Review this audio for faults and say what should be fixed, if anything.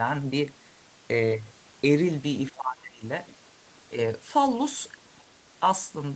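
From 2.5 to 3.04 s the speech drops by about 20 dB, roughly half a second in all, which is speech suppressed in double talk. The likely cause is the echo canceller mistaking overlapping far-end audio for echo and attenuating both. On a waveform the envelope drops, and a spectrogram shows the harmonics fading there. Tuning double-talk detection so near-end speech keeps priority would prevent it.

Faint traces of the other side's voice leaking through appear at 3.27–3.35 s, about 25 dB below the speech, and at 5.17–5.23 s, about 35 dB below. The likely cause is residual loudspeaker echo the canceller left uncancelled. They show as brief, weak spectral smudges. Stronger residual echo suppression or a headset would remove them.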